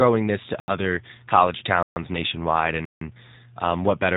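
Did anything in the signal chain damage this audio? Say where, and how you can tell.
Yes. At the codec stage, the whole clip carries G.729 codec damage that is plainly audible. The speech sounds rough and slightly synthetic, and nothing above about 3.8 kHz survives, which fits an 8 kbit/s G.729 path. The encoder does not send the waveform itself. It sends a vocal tract filter, a pitch predictor and a sparse set of pulses for each 10 ms frame, and the decoder rebuilds speech from those. The result is that buzzy, band-limited texture.

At the driver or buffer stage, there are three blocks of digital silence: 0.60 to 0.68 s (80 ms), 1.83 to 1.96 s (about 133 ms) and 2.85 to 3.01 s (160 ms). Each one drops straight to silence and returns with no fade, and the gap in between is a dead hole. That abrupt silence-fill is the usual signature of an output buffer that was not filled in time.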